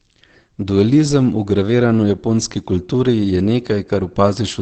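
Throughout, the speech likely went through low-rate Opus compression in its speech mode. With nothing above 8.7 kHz, it sounds plainly muffled and hoarse.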